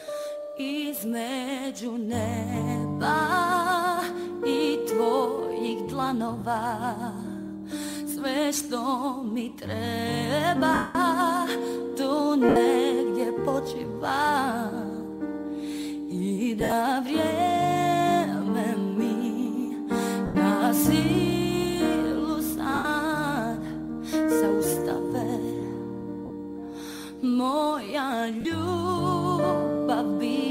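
Lost LE Audio frames break the Bluetooth stream, and the LC3 decoder conceals each gap by repeating the last spectrum with randomised phase, so the sound turns to a brief noisy smear. This happens at 6.40 s (20 ms); 10.74 to 10.95 s, the longest at 210 ms, where the smear fades toward silence; 12.49 to 12.56 s; 16.60 to 16.72 s, where the losses are scattered with the longest run about 70 ms; 20.26 to 20.35 s; 22.75 to 22.85 s; 26.26 to 26.30 s; and 28.41 to 28.45 s. The gap lengths fit 10 ms frames. The light lossy compression underneath does only slight damage.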